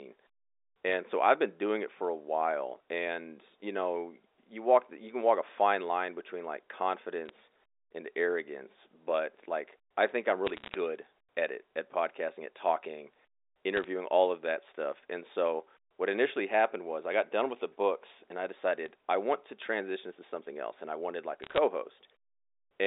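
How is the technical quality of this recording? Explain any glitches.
The recording has six short bursts of crackle, all from one fault: bit errors on a digital phone line. They occur at 0.89–0.93 s, 7.25–7.29 s, 10.47–10.74 s (after "like I think I'm"), 13.77–13.84 s (before "all of that stuff"), 18.86–18.88 s (between "the books and I" and "I want to transition"), and 21.42–21.58 s. Each one is about a few tenths of a percent of bits flipping on the 64 kbps A-law telephone link. A flip in a high-order or sign bit throws one sample far from its true value, so you hear sharp ticks and brief crackle laid over the speech.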